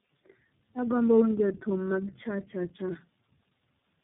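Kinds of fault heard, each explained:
Tandem speech coding: throughout, speech passes through what sounds like three speech codecs, each re-coding the last one's damage, leaving it rough, warbly and muffled, with nothing above 3.7 kHz.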